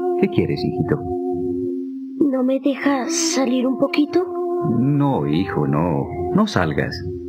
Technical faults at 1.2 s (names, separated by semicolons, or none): sample clock jitter